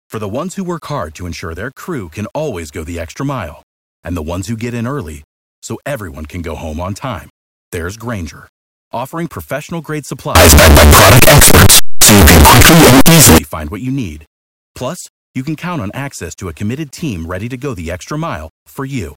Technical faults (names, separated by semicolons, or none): signed and unsigned mixed up